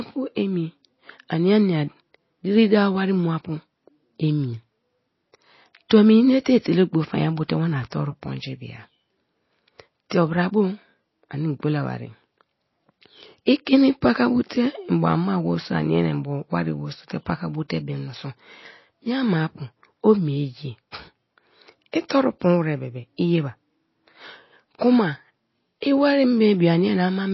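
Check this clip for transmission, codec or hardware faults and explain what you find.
Two codec faults are present, one lasting the whole clip and one at two brief moments.

MP3 compression throughout: the speech has nothing above 5.8 kHz and a watery, swirling texture, likely from MP3 encoding at a bitrate near 24 kbps that starves the encoder of bits.

Pre-echo at 10.10 s and 22.09 s: quantisation noise spread across the transform block leaks ahead of a sharp attack, heard as a short hiss about 14 ms and 17 ms early, softening the onset.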